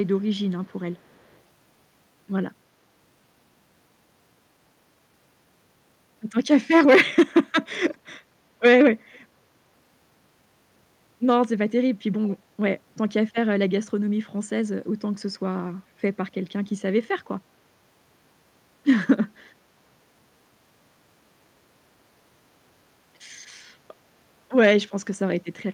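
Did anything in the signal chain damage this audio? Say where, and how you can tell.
Yes. There is echo leak at the call-processing stage. Faint copies of the speech trail it by 340 ms at 0.06–0.24, 0.47–0.73, 0.97–1.39, 7.89–7.95, 9.13–9.19 and 12.26–12.35 s, loudest near 7.9 s. On a spectrogram they show as weak, time-shifted replicas of the preceding syllables. The likely cause is a far-end echo canceller passing loudspeaker pickup.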